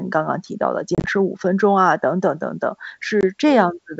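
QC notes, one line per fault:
0.95–1.10 s and 3.21–3.24 s, packet loss on an ADPCM call. The first burst drops about 70 ms in short gaps, the longest 30 ms. The second drops about 20 ms. Silence fills each gap. The decoder's predictor then mistracks, so speech resumes with brief distortion.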